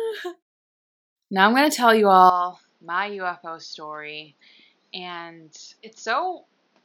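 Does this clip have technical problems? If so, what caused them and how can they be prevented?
Yes. Right after "going to tell you", at 2.30 s, the speech drops about 10 dB, loses everything above 6.8 kHz and picks up a new noise floor, with no gap. It's likely the input switched to a poorer device. Locking the recording input in settings prevents it.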